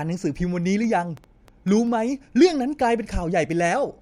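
From 0.84 s to 1.88 s, something in the chain is repeatedly injecting short pulses, likely interference from nearby equipment or a faulty connection or power supply. The result is a train of clicks running at about 5.8 per second, around seven in all, each with much the same sharp shape but arriving at an uneven pace. They reach roughly the level of the speech itself, so they tick and pop clearly over it and in the gaps between sounds.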